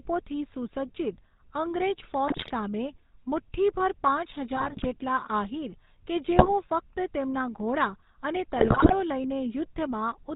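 GSM full-rate codec coding runs through the whole clip. The speech has been squeezed through a vocal-tract model excited by regularly spaced pulses, which fits GSM full rate at around 13 kbps. Nothing survives above 4 kHz, so the speech sounds dull and boxed-in. The pulse excitation gives every voiced stretch a plainly audible buzzy, gravelly roughness.

GSM bit errors break through at 2.28 to 2.51 s, 4.56 to 4.87 s, 6.36 to 6.49 s and 8.56 to 8.95 s. In each burst, corrupted bits reached the decoder and scrambled its filter, pitch or gain values for a run of frames. The spectrum lurches and the level jumps, so the speech collapses into squawks, pops and gargling. The first burst has the highest error rate, at 7.4%, and the last runs longest.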